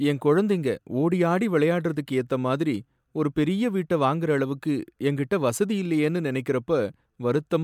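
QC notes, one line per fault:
No faults heard in this speech recording.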